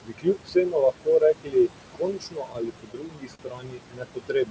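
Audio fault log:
Throughout: noise suppressor artifacts. The suppressor pulls down what it judges to be steady room noise by about 22 dB, band by band and frame by frame. The background, sitting only about 11 dB under the speech, sinks in the pauses and swells back beneath the voice. Unlike a stall or dropout, nothing in the timing changes. Only the noise floor pumps.
0.03–1.7 s and 1.94–4.50 s: speech cut by the noise suppressor. In these stretches the suppressor mistakes parts of the speech itself for noise and turns them down along with the background, by up to about 22 dB. In the first stretch roughly a second's worth of material is affected. Soft consonants and word tails come out swallowed or faint. This differs from the throughout artifacts because the voice, not just the noise between words, loses level.
2.53–3.40 s: repeated stalls (stutter). The playout buffer ran dry six times in under a second as packets arrived late, and each time the receiver stretched the last sound to bridge the wait. 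The longest wait was 42 ms, and about 89 ms was filled in all, roughly a tenth of the span. No audio is lost, so it is not a dropout. The speech drags and hiccups rather than skipping.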